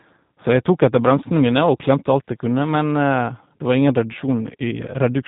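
From start to finish, the speech carries G.729 codec damage. The coder rebuilds each 10 ms frame from a vocal tract filter, a pitch predictor and a few pulses. It does not keep the actual waveform. Nothing above about 3.8 kHz survives, so the sound is narrow and dull. The roughness is plainly audible. Voiced sounds take on a buzzy, synthetic edge. This fits an 8 kbit/s G.729A coder.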